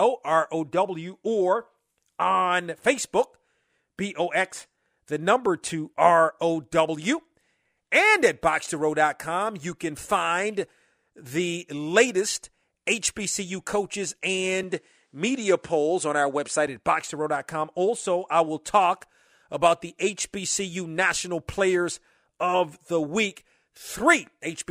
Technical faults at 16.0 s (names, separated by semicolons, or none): input switched to a poorer device